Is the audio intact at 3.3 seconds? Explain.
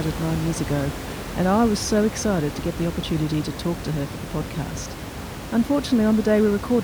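Yes, the speech is intact at 3.3 seconds, with only the room's own background noise sitting about 10 dB below it as part of the recording.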